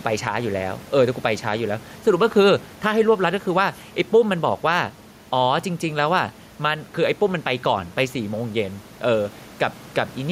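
Gain pumping runs through the whole speech clip. The room noise sits about 28 dB below the speech, and the gain swings by about 5 dB as loud sounds are pulled down, so loud and soft parts end up closer in level and the sound is squashed. This is likely an input gain set far too high, with a fast limiter clamping it down on loud syllables. On a waveform the peaks look flattened.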